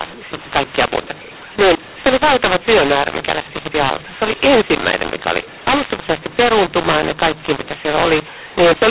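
From start to finish, mu-law and A-law are mixed up: mu-law telephone speech is decoded as A-law, scrambling levels. Unlike clipping, even pauses fill with noise.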